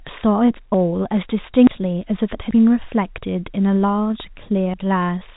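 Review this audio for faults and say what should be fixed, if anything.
At 0.74, 1.67, 2.51 and 4.74 s the speech skips ahead by about a tenth of a second, likely a dropped buffer (overrun). Unlike an underrun, no silent gap is inserted; the sound simply jumps. To prevent it, enlarge the capture buffer or give the recording thread higher priority so each block is read before the hardware overwrites it.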